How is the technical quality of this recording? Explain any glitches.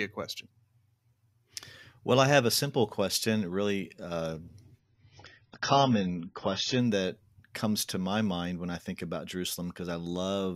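Quality is uneven because of one glitch. From 4.79 to 6.79 s, an adaptive stream at a lower bitrate takes over: the connection slowed, so the player switched to a much leaner encode for two seconds. The speech abruptly loses everything above 7 kHz and turns dull, which fits a drop from around 96 kbit/s to 16 kbit/s AAC. Full quality then snaps back with no gap.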